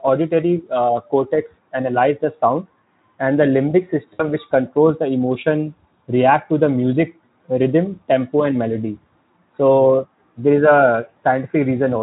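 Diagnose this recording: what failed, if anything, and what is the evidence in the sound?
Between 4.14 and 4.29 s, after "sound and the limbic" and before "which controls the", the sound smears into a fading buzzy tone or coloured noise. This is VoIP packet loss concealed by the speech codec: about 60 ms went missing on the network, which fits three 20 ms frames. The Speex decoder extrapolated its last pitch and filter with falling gain.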